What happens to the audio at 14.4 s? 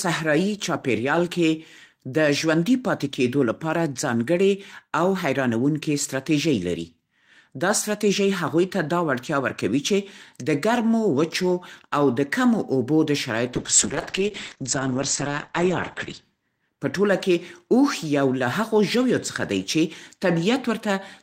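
A call bitrate drop runs from 13.54 to 16.29 s. Told to spend far fewer bits, the encoder codes the speech coarsely and cuts the top end above 8 kHz, so it sounds rough and muffled, which fits a fall from 32 to 9 kbps.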